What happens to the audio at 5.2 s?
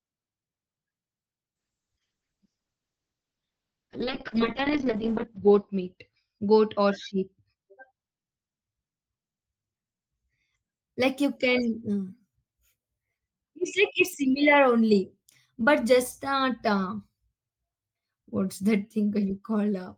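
A call bitrate drop runs from 1.56 to 10.87 s. The encoder, starved of bits, cuts everything above 6 kHz. The speech sounds muffled and watery, consistent with roughly 6 kbps.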